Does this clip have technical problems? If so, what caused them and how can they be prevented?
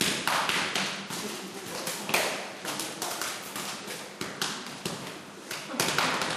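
No, the recording of sounds has no technical problems to identify, so there is nothing here that needs preventing.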